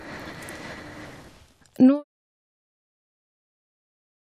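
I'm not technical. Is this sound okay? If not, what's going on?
Yes, nothing is wrong with this speech recording. The only change you'll notice is a deliberate, smooth fade out that begins at around one second and is complete by 2.05 seconds, just as an editor would gently lower the volume, with no click or sudden cut.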